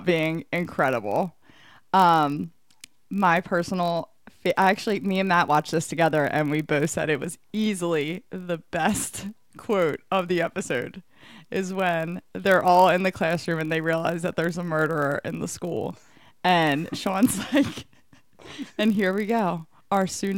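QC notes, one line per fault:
Throughout, block size mismatch (padded): each block ends early and is zero-filled, giving a 43.1 Hz buzz from regular gaps, which fits a 1024-sample read size. Speech runs at 0.999 speed and normal pitch. Waveform shows evenly spaced dropouts; spectrogram shows vertical striping.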